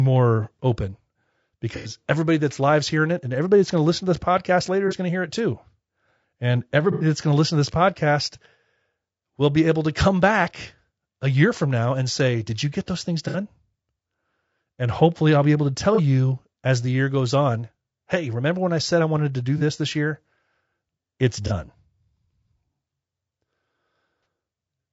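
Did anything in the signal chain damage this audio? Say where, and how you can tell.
Yes. The speech has a constant rough, grainy texture, with noise filling the gaps between pitch harmonics and a thin, synthetic-sounding top band. That points to the codec stage, likely low-delay AAC (AAC-ELD) near 32 kbps, whose short frames resolve pitch poorly. Unlike network damage, it never comes and goes.

AAC frame loss with concealment, at the network or transport stage, is heard at 1.76, 4.88, 6.92, 13.28, 15.95, 19.58, 21.47 and 24.23 s. Each is a smeared, noisy patch of 30 to 90 ms, where the decoder rebuilt missing frames from the last good spectrum. Unlike plain dropouts, none goes silent.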